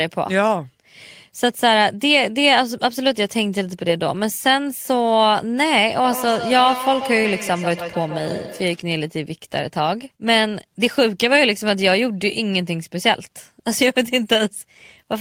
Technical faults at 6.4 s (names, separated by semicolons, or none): feedback echo between two devices